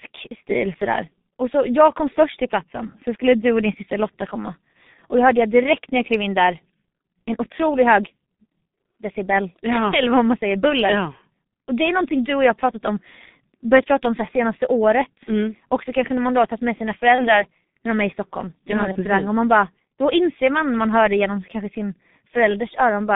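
Throughout, the speech is squeezed into roughly 150 Hz to 3.7 kHz and sounds muffled and hoarse, with smeared consonants. This points to heavy G.723.1 codec coding near 6.3 kbit/s, not simple band-limiting. At 17.15 s and 18.92 s, VoIP packet loss concealed by the speech codec fills the gap with a fading buzzy tone or coloured noise instead of silence. Each gap fits one lost 30 ms frame, and the first leaves the speech weakened until 17.44 s.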